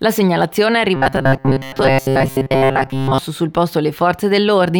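New audio was likely arriving too seldom from about 0.96 to 3.18 s, so the playback software kept filling the gaps by looping the last short buffer while fresh material was skipped. Repeats made up the bulk of that stretch. The result is robotic sound from repeated short buffers: a rigid, metallic buzz locked at 134 Hz, which points to a loop about 7.5 ms long, while the underlying sound still roughly comes through.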